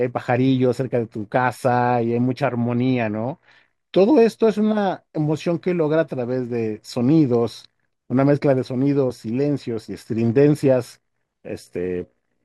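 No technical faults can be heard anywhere in this recording.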